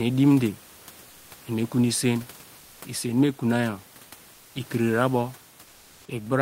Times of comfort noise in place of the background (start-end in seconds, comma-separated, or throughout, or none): 1.09-1.27, 2.59-2.77, 4.33-4.51, 5.65-6.01